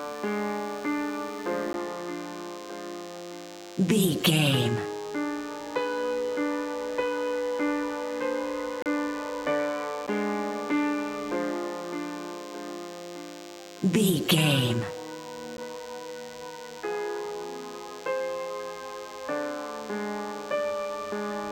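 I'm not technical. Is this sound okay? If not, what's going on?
No. A thin, steady buzz runs through the whole clip. This is DECT cordless phone buzz. A nearby cordless phone or its base sends short radio bursts 100 times a second. The audio equipment picks them up and turns them into a hum. It sits quieter than the main sound.

There are also four tiny gaps. Each one is a block of digital silence: the sound drops to nothing and returns abruptly. They occur at 1.73 s, 8.82 to 8.86 s, 10.07 s and 15.57 s. The computer likely didn't deliver audio in time.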